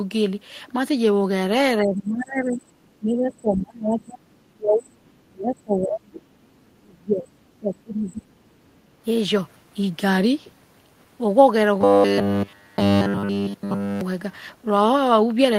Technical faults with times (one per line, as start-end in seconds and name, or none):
1.81-6.40 speech suppressed in double talk
2.43-2.95 other side's voice leaking through
3.33-3.56 other side's voice leaking through
5.57-6.76 other side's voice leaking through
6.79-8.42 speech suppressed in double talk
8.70-8.89 background gated by the echo canceller
11.81-14.01 robotic sound from repeated short buffers